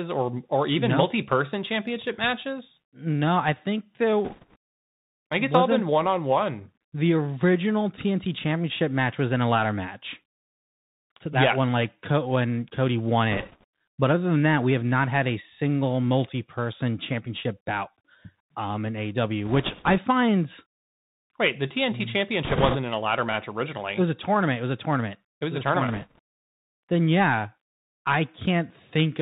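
Bluetooth CVSD headset codec narrowing runs through the whole recording. The speech is carried as a single up-or-down decision per sample, consistent with a 64 kbit/s one-bit stream, with a step size that adapts. Nothing above 4 kHz survives, and the damage is plainly audible. Loud high-frequency energy outpaces the step and distorts, s sounds turn scratchy, and a fine granular hiss sits beneath the voice.

Bit errors on a Bluetooth voice link appear in five short bursts: 4.25 to 4.56 s, 13.32 to 13.64 s, 19.45 to 19.99 s just after "um in", 22.45 to 22.77 s just before "in a ladder match", and 25.88 to 26.19 s. Flipped bits each nudge the signal by one step, whose size grows with the speech level, and their effect fades quickly, so instead of sharp clicks there is a rushing crackle over the speech. Most bursts are at a couple of percent, while the one near 22.4 s, at around 7 percent, is the roughest.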